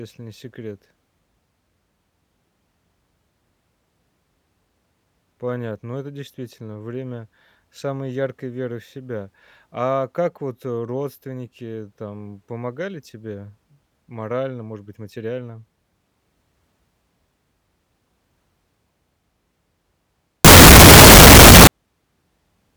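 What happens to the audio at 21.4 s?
At 21.4 s the speech is inside a burst of float read as integer, running from about 20.45 s to 21.67 s. The likely cause is 32-bit floating-point samples being interpreted as 32-bit integers, so each sample's sign and exponent bits, not its true amplitude, set the output level. The waveform turns almost square at an almost fixed, high level, giving a very loud, harsh sound with background noise as loud as the speech, though the pitch can still be followed.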